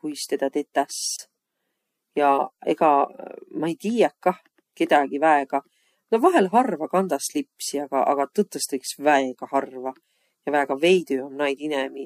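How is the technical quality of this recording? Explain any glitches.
One technical glitch stands out in this speech recording: a gap at a join of encoded pieces, from 1.16 to 1.19 s. The speech drops out for about 26 ms, then resumes exactly where it left off. The recording appears to have been encoded in separate pieces and joined without trimming. Each encoder pass leaves leading silence and padding on its last frame. Both remain at the seam. The result is a brief dropout with smeared edges.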